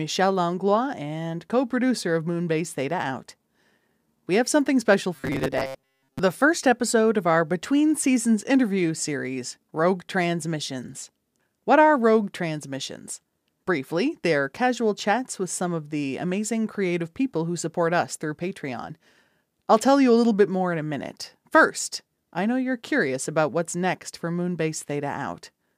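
From about 5.16 to 6.20 s the speech goes robotic, a stiff metallic buzz near 133 Hz that only loosely tracks the words. That's likely repeated short buffers: a chunk of roughly 7.5 ms looping while most of the real audio gets skipped.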